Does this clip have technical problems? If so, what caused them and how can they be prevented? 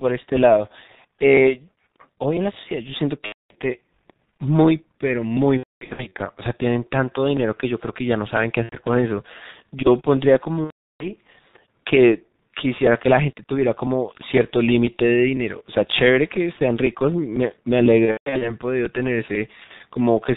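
Yes. The whole clip runs through the G.723.1 codec at 6.3 kbit/s, and it's heavily damaged by it. That codec works in 30 ms frames, cuts everything above 4 kHz, and updates its model of the voice slowly, so the speech comes out muffled and hoarse, and consonants smear into each other. You'd avoid this by carrying the call on a wideband codec with a higher bitrate instead of this early low-rate one.

There's also VoIP packet loss concealed by the speech codec, in six places. At 3.26 to 3.55 s about 240 ms is missing. From 5.57 to 6.11 s the gaps are scattered, adding up to 390 ms with a longest run of 240 ms. Shorter ones fall at 8.63 to 8.75 s (90 ms) and 19.64 to 19.71 s (60 ms). At 10.64 to 11.07 s about 360 ms goes, and from 18.06 to 18.56 s 240 ms is lost, scattered, with a longest run of 150 ms. In each gap the decoder keeps extending its last pitch and filter while turning the level down, so the speech smears into a buzzy tone or coloured noise that fades away. 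Because every frame builds on the one before, the voice stays weak or distorted for a moment after real packets return. A steadier network path with QoS priority, an adequate jitter buffer and forward error correction would keep most of those packets from going missing.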